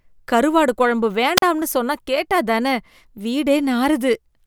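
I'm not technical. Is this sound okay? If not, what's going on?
No. At about 1.37 seconds the speech briefly cuts out, a wireless microphone squelch dropout lasting until about 1.42 seconds. The radio link between the microphone and its receiver weakened for a moment, so the receiver muted its output to avoid playing static. You hear a short rise of hiss, then a gap of near silence of roughly 40 milliseconds, and then the speech comes back.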